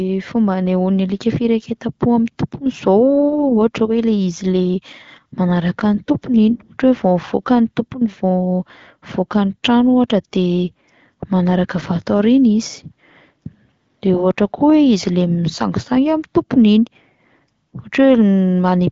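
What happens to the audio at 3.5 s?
Nothing goes wrong at 3.5 s: the speech runs on intact through that moment, carried by the AMR wideband (HD Voice) codec at 12.65 kbit/s with its usual top limit near 7 kHz.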